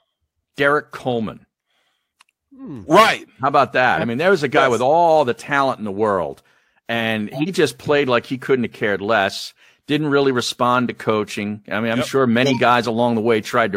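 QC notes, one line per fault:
7.32–7.48 s and 12.43–12.60 s: corrupt frame decoded. A brief glitch follows "in the world and", then another follows "mean I'm yep sure". A few damaged frames were decoded anyway, scattering energy across wrong frequencies. The first reaches about -10 dBFS, the second about 10 dB higher.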